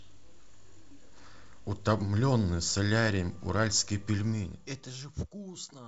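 Speech clip with no technical faults to report.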